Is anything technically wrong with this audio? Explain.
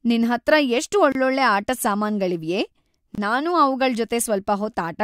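Yes. The speech has two gaps at joins of encoded pieces, spaced 2.0 s apart. The first, about 28 ms long, runs from 1.12 to 1.15 s, between "ನಿನ್ಹತ್ರ ಎಷ್ಟ್" and "ಆಟದ್ ಸಾಮಾನ್ಗಳಿವ್ಯೇ ನಾನು". The second, about 27 ms, runs from 3.15 to 3.18 s, just after "ಆಟದ್ ಸಾಮಾನ್ಗಳಿವ್ಯೇ". The audio appears to have been encoded in 2-second segments and joined untrimmed. Each segment's encoder start-up delay and final-frame padding remain as silence. Each gap is a brief dropout with smeared edges, after which the speech resumes where it stopped.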